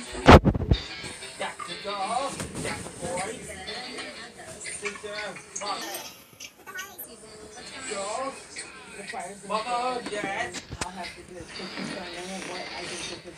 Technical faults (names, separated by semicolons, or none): section at the wrong speed